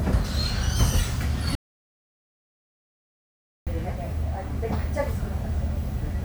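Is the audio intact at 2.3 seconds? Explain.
No. At 2.3 seconds the sound is inside an audio dropout to silence running from 1.55 to 3.67 s, about 2.1 s lost. The input was likely cut off while recording continued, writing silence with no room tone. The waveform shows a flat line, the spectrogram a fully blank band.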